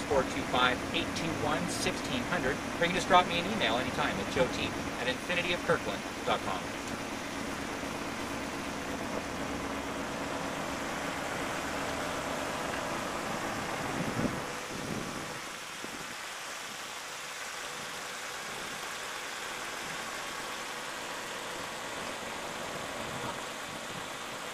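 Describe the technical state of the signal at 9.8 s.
Overlap-add ripple runs through 9.8 s and the whole clip: mismatched frame overlap swings the level by about 11 dB around 300 times a second, giving a metallic buzz.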